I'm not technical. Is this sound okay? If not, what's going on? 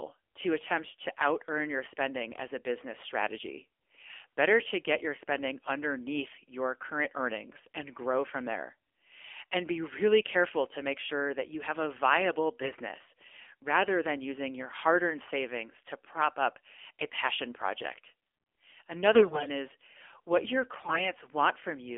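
No. Throughout, the speech sounds thin, muffled and plainly buzzy, like an old mobile phone call. That's the AMR narrowband mobile codec, a phone-network format that discards everything above about 3.4 kHz and rebuilds the voice from a simplified model, leaving it synthetic.

There are also three short bursts where the voice turns hoarse, scratchy and gargly while keeping its pitch and loudness. These are AMR bit errors, where corrupted data on a weak link made the voice model misfire. They occur at 12.62–12.77 s right after "you have a viable", at 19.14–19.50 s just before "is what your", and at 20.76–21.12 s right after it.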